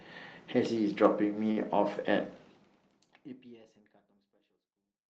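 A packet arrived late on this call-path speech recording, and the jitter buffer ran dry from 1.51 to 1.59 s, a short stall from a late packet. The receiver held the last sound for about 55 ms until the packet turned up, then carried on where it had stopped. Nothing is lost, but that sound is drawn out with a faint buzzy, slightly dipped quality, and everything afterwards sits 55 ms later. The fade-out from around 2 s is smooth, and the top end stops near 12 kHz, which fits Opus coding.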